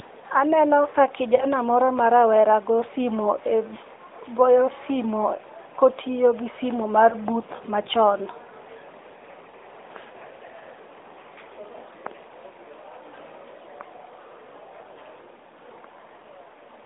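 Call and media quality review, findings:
Lost AMR speech frames at 1.36–1.46 s (before "ma rawera"), 7.10–7.15 s (before "booth machon") and 9.50–9.55 s: brief dips or warble, consistent with one or two corrupted 20 ms frames concealed by repeating the last good parameters at falling gain. Narrowband AMR path audible, 250 Hz–3.7 kHz line band.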